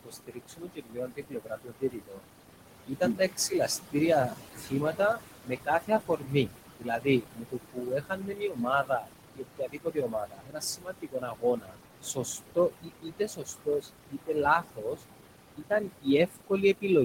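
Noise suppressor artifacts run through the whole speech recording. The suppressor pulls down whatever it judges to be steady noise by about 21 dB, frame by frame, so the room noise, which sits only about 7 dB below the voice, dips between phrases and resurfaces underneath them. Speech cut by the noise suppressor happens from 0.04 to 2.26 s, 2.88 to 3.96 s, 4.28 to 15.01 s and 15.57 s to the end. The suppressor mistakes parts of the voice for noise and attenuates them by up to about 22 dB (about 17 dB in the second stretch). Roughly two seconds of the first span, a fraction of a second of the second and around seven seconds of the third sound swallowed or faint.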